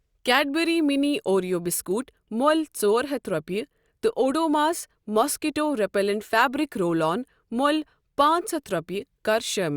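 No technical faults can be heard anywhere in the clip.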